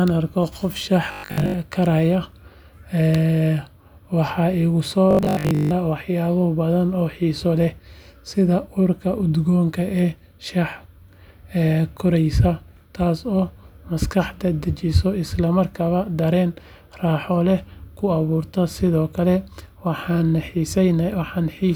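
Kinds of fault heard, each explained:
Robotic sound from repeated short buffers, 1.12–1.54 s and 5.11–5.71 s (after "waxa igu soo"): rigid 50 Hz buzz, likely from 20 ms chunks looping while most real speech is skipped.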